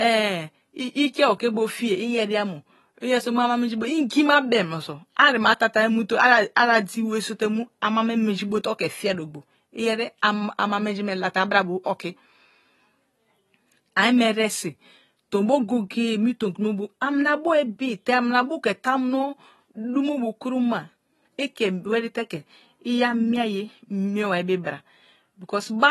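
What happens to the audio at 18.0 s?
At 18.0 s the speech carries the same AAC compression damage heard across the whole clip. It sounds dull, with smeared, fizzy sibilants, and nothing reaches above 12 kHz. This is likely AAC-LC at a low bitrate, around 32 kbps, cutting off the top band and thinning quantised frequency lines. A spectrogram shows a flat ceiling at 12 kHz.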